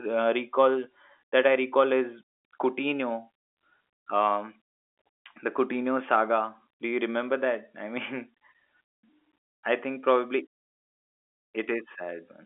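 The speech sits in a telephone band of 300 Hz to 3.5 kHz with nothing above 3.7 kHz, which fits G.711 mu-law telephone coding at 64 kbps working as intended, and no technical faults can be heard.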